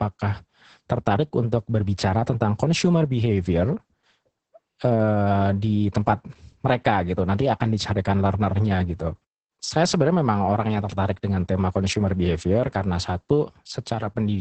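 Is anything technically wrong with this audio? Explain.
Yes. Throughout the speech there is Opus voice compression with heavy codec damage. The band stops at about 8.8 kHz, the wideband limit of the SILK linear-prediction coder, and the excitation is coded coarsely in short frames, a heavy loss that points to a bitrate near 10 kbps. The speech sounds muffled, hoarse and faintly robotic. A plain low-pass filter would only dull the top end. This coarse, grainy texture shows it is codec damage.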